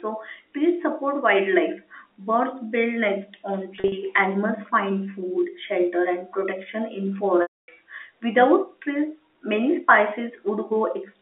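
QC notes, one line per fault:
3.76–3.92 s, packet loss with pitch repetition: just after "nests on", brief buzzy catches where the sound seems to stick. About 100 ms of audio is missing in short gaps spread over 160 ms, none longer than 40 ms. Each gap is bridged by repeating the last pitch period.
7.42–7.68 s, packet loss with pitch repetition: after "shelter and protection in", a held buzz fades to silence, then speech cross-fades back. The 260 ms gap outlasts the repeated pitch period, which fades out over about 50 ms.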